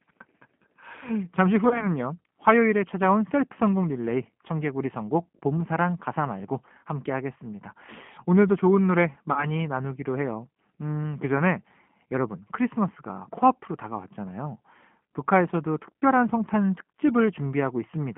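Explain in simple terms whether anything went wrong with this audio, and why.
Yes, two things went wrong. The whole recording sounds thin, slightly rough and a little artificial, like a cheap phone call, with nothing above about 3.4 kHz. That is the G.729 codec, a low-rate internet-phone codec. Instead of sending the actual sound, it sends a rough description of it: a filter standing in for the throat and mouth, a pitch, and a few pulses every few milliseconds. The receiving end then rebuilds the speech from that sketch, and here the rough edges are plainly audible.

There are also two short glitches, from about 1.69 to 1.88 s and from about 9.32 to 9.48 s, where the speech turns briefly stretched and smeared, then weak, before recovering. This is VoIP packet loss concealed by the speech codec. Small pieces of the call went missing in transit, about 20 ms the first time, probably one packet, and about 40 ms the second, probably two. 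The decoder filled each gap by stretching out the last sound it had while fading it down. Each rebuilt moment depends on the one before, so the speech stays off for a short while after the data returns.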